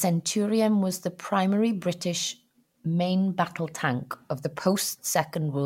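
No technical fault can be heard anywhere in this speech recording. There is nothing to place on a timeline, so no times or values apply.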